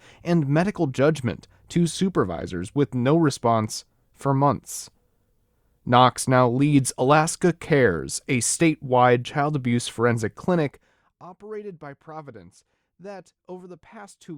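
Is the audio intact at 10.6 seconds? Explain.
No: from 10.55 to 11.12 s, after "statewide child abuse forensic", a roughly 20 dB level drop was applied in unsmoothed steps, about 100 per second, causing audible zipper noise.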